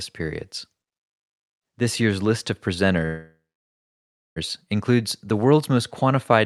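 At 3.05 s the speech stalls in a call audio freeze, most likely because packets were held up in transit and the jitter buffer ran dry. The receiver stretches the last sound into a short fading buzz or hiss, then about 0.98 s of silence, and the speech resumes at 4.38 s exactly where it stopped. The 1.31 s gap is inserted rather than cut out, so nothing is lost, but everything afterward arrives later. The band tops out near 12 kHz, as a 64 kbps Opus call path would.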